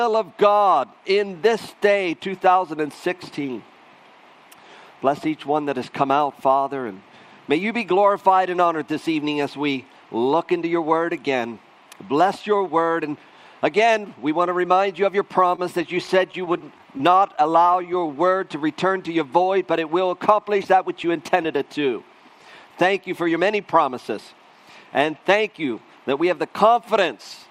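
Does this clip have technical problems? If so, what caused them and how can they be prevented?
Yes, there are three related network-playback problems in the middle of the clip.

Scattered short gaps show up between 15.55 and 17.40 s. About ten packets went missing or arrived too late, the longest hole around 30 ms, and the receiver papered over each by stretching the last bit of sound. That's the brief ticks and smears you hear. Forward error correction or a cleaner, prioritised network path would cut those losses.

A jitter buffer slow-down follows from 17.63 to 18.59 s. The buffer ran short, so the receiver repeated pitch periods to rebuild its reserve, adding 92 ms and playing at 91% speed with unchanged pitch, so things sound drawn out. Steadier packet delivery and a sensibly sized buffer target would avoid it.

A jitter buffer speed-up hits from 20.59 to 21.45 s. Too much audio had piled up, likely after a burst of delayed packets arrived together, so the receiver trimmed pitch periods, roughly a tenth of a second in total, running at 109% speed and sounding hurried. 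Reducing network jitter would prevent it.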